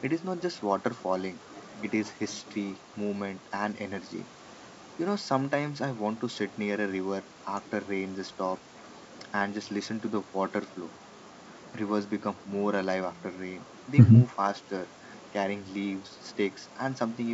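Speech over G.722 wideband coding, with nothing technically wrong.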